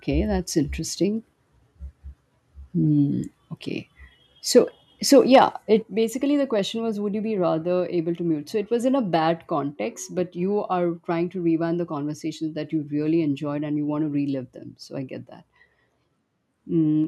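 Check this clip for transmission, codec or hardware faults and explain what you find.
The speech carries two kinds of hardware-side fault: brief overload distortion on loud peaks, followed by abrupt drops in input level.

Microphone overload appears at 4.56 to 4.59 s and again at 5.13 to 5.39 s. The loudest moments gain a harsh, crackly edge. The likely cause is an input level set high enough that peaks hit the converter's ceiling, about 1 dB over in the first burst and about 4 dB in the second. Tops get sheared off, roughly a twentieth of the samples in the short burst and around one in a hundred in the longer one. On a waveform these show as flat-topped plateaus. A spectrogram shows broadband smearing above the voice's harmonics.

Microphone volume stepped down at 5.82 s, shortly after the second distorted stretch, and again at 17.04 s. The level drops at once, by about 7 dB and then by about 2 dB, with voice and background falling together. 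This fits a call application likely reacting to the clipping by lowering the device's input gain in a single step. The waveform envelope shrinks abruptly at each point, and a spectrogram dims uniformly across all frequencies with no fade.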